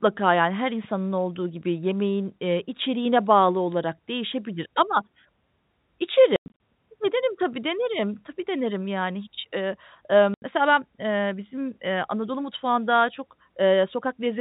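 Around 6.36 to 6.5 s there's packet loss filled with silence: roughly 180 ms of this speech drops out, scattered over about 240 ms, with the longest hole 100 ms. The gaps come in chunks that fit 20 ms packets, and the receiver just played nothing, so the edges are hard. It happens again at 10.34 to 10.42 s, right after "yani hiç ııı ııı", an 80 ms hole, all under the usual G.711 telephone band.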